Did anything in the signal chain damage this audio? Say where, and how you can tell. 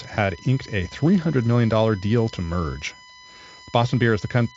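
Yes, there's USB whine riding under the speech from start to finish. It sits at a steady 1 kHz, with its strongest component at the 2 kHz harmonic, about 25 dB below the speech. That fixed pitch points to the USB bus's 1 ms frame timing, with current pulses leaking into the analogue side through shared power or ground. The band stopping near 7.7 kHz is just the Speex codec's upper edge, with at most faint coding texture.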